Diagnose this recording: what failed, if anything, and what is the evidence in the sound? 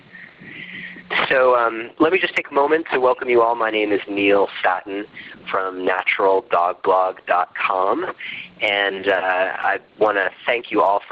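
Gain pumping runs through the whole recording, most likely from input gain set far too high with a fast limiter or compressor in the call processing clamping it back on every loud sound. The gain is pulled down each time something loud arrives, a swing of around 15 dB. Loud and quiet passages sit squeezed toward one level, giving a flattened, breathing texture across the full clip.

A short concealed packet loss occurs in the network stage between 9.62 and 9.65 s. About 10 ms of audio failed to reach the decoder in time, and the receiver patched the hole by extending the preceding sound for roughly 11 ms before crossfading back into real audio. It is heard as a brief smear or wobble in a band-limited stream with nothing above 8 kHz, which fits a low-bitrate Opus call path.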